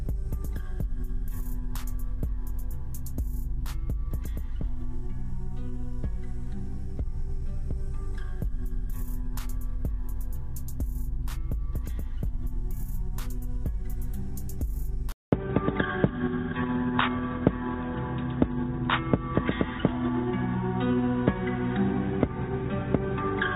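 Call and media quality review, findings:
At 15.12 s, a 0.2 s dropout, then the audio goes dull and boxy through to the end, with nothing above 3.8 kHz. Level about the same, faint new noise floor underneath. Likely input switched to a poorer device: headset call profile or another mic.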